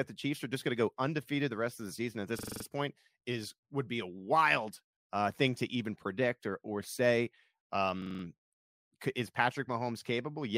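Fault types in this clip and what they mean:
System hang loop: The computer or driver stalled while the hardware kept replaying one ring buffer. A 42.67 ms piece repeats, giving a stutter at 23.4 Hz, which fits a 2048-sample buffer. It happens at 2.39 s, after "of the season at", and at 8.02 s.
Stream reconnect: The connection dropped and the player restarted its decoder mid-stream. At 8.64 s the sound goes silent for 160 ms. It then resumes 104 ms earlier than where it stopped, so a short stretch is heard twice.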